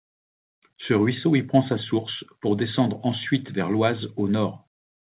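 No faults can be heard in this speech; it arrives over a call path whose sound has nothing above 4 kHz and the grainy coding noise of narrowband telephone audio, which fits a G.711 mu-law codec.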